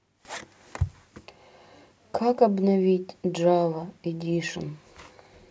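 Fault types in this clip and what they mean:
No fault types are present in this clip.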